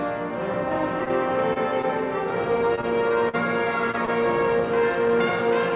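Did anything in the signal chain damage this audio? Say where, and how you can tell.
Yes. The damage sits in the network and jitter-buffer stage of a call path whose audio stops at 4 kHz, which fits G.711 A-law at 64 kbps. From 1.0 to 1.85 s there are repeated stalls (stutter): packets arrived late, the buffer ran dry five times, and the receiver stretched the last sound to cover about 73 ms in total, the longest wait 23 ms. Nothing drops out, but the sound hitches and drags.

From 2.75 to 4.10 s there is repeated packet loss with a robotic sound. Packets went missing five times in close succession, and each hole was patched by continuing the preceding sound, about 122 ms concealed in all, the longest gap 45 ms. Roughly 80 ms of real audio is gone, so this stretch is choppy, with small pieces audibly missing rather than merely delayed.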